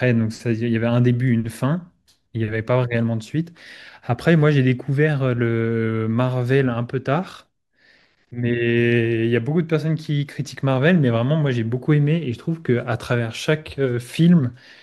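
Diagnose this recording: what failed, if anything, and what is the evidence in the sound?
Nothing in the speech signal points to a failure at any stage of capture, processing, transmission or playback.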